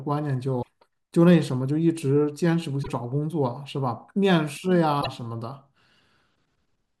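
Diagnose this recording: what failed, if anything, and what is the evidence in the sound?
The codec stage failed: damaged data in a compressed stream produces brief disruptions in the speech at 0.59–0.68 s, 2.80–2.89 s and 4.98–5.07 s, each about 90 ms. The decoder misreads corrupted frames and resynchronises. Unlike a network dropout's silence or smooth concealment, these are decoding errors from corrupted frames.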